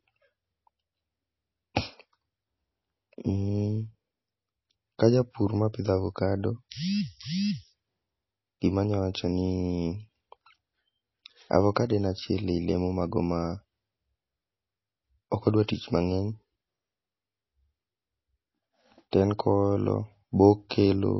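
All the way through, the speech has a watery, swirly quality and nothing above 5.8 kHz, so the treble is simply gone. That's plainly audible MP3 compression, most likely at a low bitrate around 24 kbps, where the encoder runs short of bits, drops the top band and lets weak frequency lines flicker between frames. At 19.11 s there's a pre-echo: a short hiss smeared about 20 ms ahead of a sharp attack. It happens because the codec's block noise spills into the quiet moment before the attack, which also loses its crispness.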